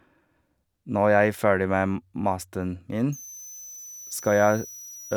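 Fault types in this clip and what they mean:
Switching supply whistle: from 3.12 s to 5.17 s, a high whistle moving between about 5.8 and 6.6 kHz sits roughly 20 dB below the speech. A switching power supply cycling in an audible burst mode, or beating against another converter, leaks this tone into the audio.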